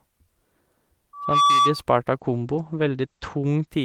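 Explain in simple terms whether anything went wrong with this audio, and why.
Two things went wrong, one after the other.

From 1.13 to 1.83 s there is a loudspeaker feedback squeal. A microphone was picking up the sound of the loudspeaker it was feeding, so the sound went round and round in a loop, getting louder each time at one pitch. In about a third of a second, a piercing 1.2 kHz whistle builds up over the speech, and it stops at 1.83 s.

From 2.14 to 3.73 s there is a call bitrate drop. The calling system decided the connection had become weak and told the encoder to send much less data, for just over a second at its lowest. To save data, it describes the sound more crudely and throws away the higher frequencies, cutting everything above about 8 kHz instead of 20 kHz. The speech sounds muffled and rough until the data rate comes back up.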